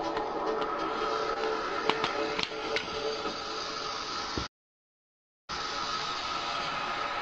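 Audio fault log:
1.33–1.38 s, short concealed packet loss: a brief smear where roughly 20 ms of sound went missing and was patched by extending the preceding audio before blending back.
4.46–5.50 s, playback stall: the sound cuts to silence mid-flow for about 1.02 s, then resumes, likely because the player ran out of buffered data.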